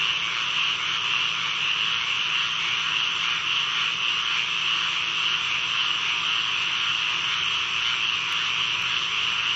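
From 7.83 s to 9.33 s there are periodic USB or driver dropouts: about every 0.5 s, around a millisecond of audio is skipped rather than replaced with silence, producing roughly four small ticks. Unlike random network packet loss, these ticks are evenly spaced, and unlike clipping clicks, they do not follow the signal's loudness. They are audible only while sound is present, in band-limited audio that has nothing above 8 kHz.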